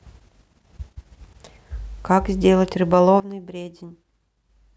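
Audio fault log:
3.2 s to end, sudden gain jump: speech and noise floor drop together by about 16 dB in one step, likely from a gain change applied unramped.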